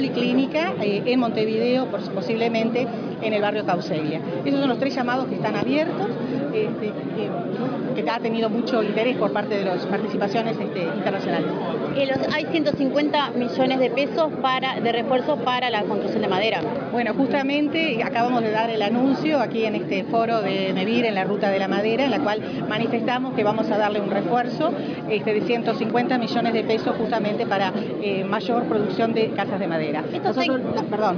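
No technical faults can be heard anywhere in the recording; the signal stays steady and intact for its whole duration.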